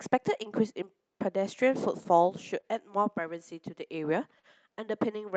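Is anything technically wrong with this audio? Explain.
Yes. Two short stalls from late packets occur, at 2.61 to 2.66 s and 4.39 to 4.46 s. Each time the jitter buffer ran dry, so the speech is briefly held, for about 21 ms and 39 ms, then resumes unbroken.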